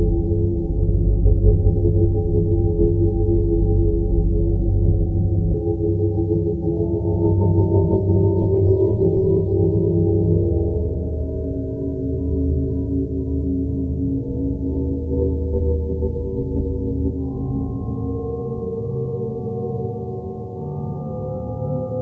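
At 5.54 s the sound jumps abruptly forward, with no gap or fill at the join, as if about a second of audio has vanished. This is a skip ahead: that stretch was dropped in transit or discarded when the jitter buffer overflowed, and playback spliced the audio on either side almost directly.

From 5.83 to 9.37 s the audio runs slightly fast, about 3 percent, yet keeps its pitch. This is a jitter buffer speed-up: the receiver held excess audio and trimmed many short pitch-period slices, about a tenth of a second in total, to shrink the delay. Throughout, nothing above 8 kHz is present, which fits the G.722 call codec on this path.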